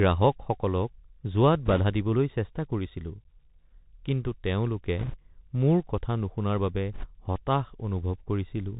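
Bluetooth CVSD headset codec damage runs through the whole of this speech recording and is plainly audible. The sound is held to a narrowband telephone band with nothing above 4 kHz, and a granular hiss sits under the speech. CVSD codes each sample as a single up-or-down step at a 64 kHz rate, which fits a 64 kbps headset link. Its adaptive step cannot keep pace with loud high-frequency content, so s sounds turn scratchy and distorted. Bit errors on a Bluetooth voice link appear in three short bursts, at 1.66–1.81 s, 4.98–5.16 s and 6.93–7.07 s, each heard as a brief rushing crackle laid over the speech. The error rate in each burst is around a couple of percent. Each bit of a CVSD stream moves the output by only one small step, and the codec's adaptation lets each wrong step fade. The flipped bits therefore smear into noise rather than producing sharp, loud clicks.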